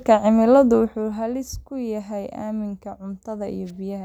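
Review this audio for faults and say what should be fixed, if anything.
Nothing here needs fixing, since I can't hear any faults in this speech clip.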